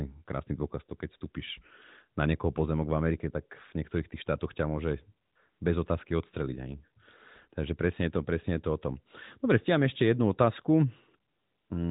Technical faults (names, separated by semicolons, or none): AMR comfort noise